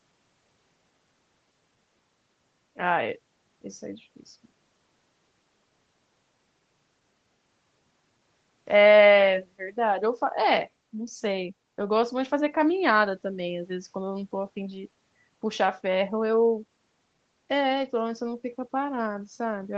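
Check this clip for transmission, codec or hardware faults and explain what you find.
Checking this clip for faults turns up none.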